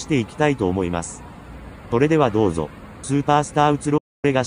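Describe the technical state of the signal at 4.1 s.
The signal is muted by a digital broadcast dropout. It runs from 3.98 to 4.25 s. The receiver lost valid frames and silenced its output. The sound fades out within 8 ms, leaving about 256 ms of silence. This fits roughly eight lost frames.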